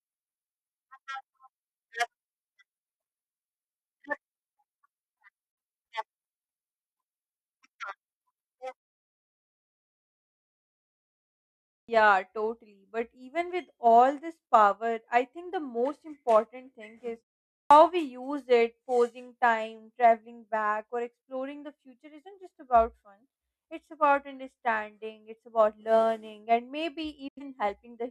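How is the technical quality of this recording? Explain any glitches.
The speech recording has two kinds of glitch: brief digital broadcast dropouts mid-flow, and clipped starts after pauses.

Digital broadcast dropouts occur from 5.52 to 5.58 s and from 27.28 to 27.42 s. The receiver rejected corrupt frames and muted, fading out over about 8 ms. The holes last about 43 ms and 85 ms, fitting one and two lost frames.

Clipped starts after a pause occur at 11.84 s, after a 3.1 s pause, and at 17.66 s, after 0.5 s. The output device was still waking or relocking when sound resumed, swallowing about 45 ms, so speech begins abruptly without its opening sounds. The lost onset is what marks this fault.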